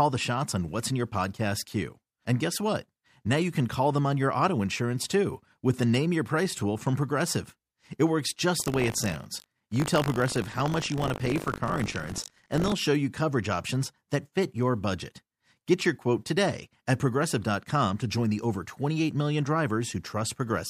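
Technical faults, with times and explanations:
8.58–12.74 s, buffer tearing: a steady robotic buzz at 50 Hz sits on the speech, which fits a 20 ms buffer period. The writing side and the hardware read pointer have drifted so they cross within every period. In each one, a small slice, under a tenth, is stale audio from roughly 70 ms earlier, spliced in with an abrupt join at both ends. Those repeated discontinuities produce the rattle at the period rate, heard only while signal is present.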